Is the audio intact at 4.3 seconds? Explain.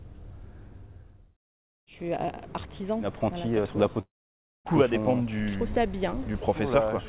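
No. A call audio freeze runs from 4.01 to 4.68 s. The last sound is briefly stretched into a fading buzz or hiss, then silence for about 0.56 s. Packets were likely held up, emptying the jitter buffer. Playback then resumes where it stopped, so nothing is lost.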